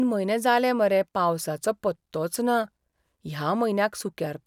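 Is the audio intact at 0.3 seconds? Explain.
Yes, the audio is intact at 0.3 seconds, with no fault audible at that point in the speech.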